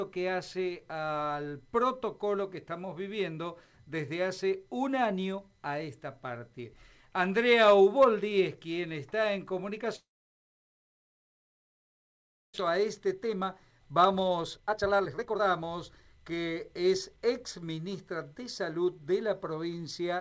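Audio passed through a G.722 call path, so the spectrogram shows nothing above 8 kHz. A long network dropout from 9.96 to 12.6 s, likely caused by packets failing to arrive, leaves a brief fading buzz or hiss. After that comes about 2.5 s of flat waveform and blank spectrogram, with 1.6 s of sound lost. A jitter buffer speed-up then runs from 12.67 to 17.18 s, playing at 121% speed with pitch unchanged and trimming roughly a second. On the spectrogram, events arrive closer together while the harmonics stay at the same heights.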